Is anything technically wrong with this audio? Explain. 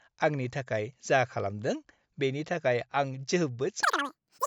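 Yes. From 3.83 s onward the speech races and squeaks, 2.76 times faster and 17.6 semitones higher. This is a wrong sample rate, consistent with 16 kHz audio played at 44.1 kHz unconverted.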